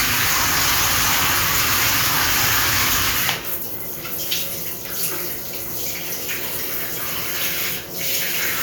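Nothing technical stands out in this recording of sounds, so there's no fault here to point to or explain.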